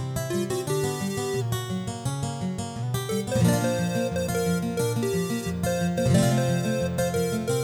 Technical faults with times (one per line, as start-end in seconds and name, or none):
1.42-2.83 drift correction step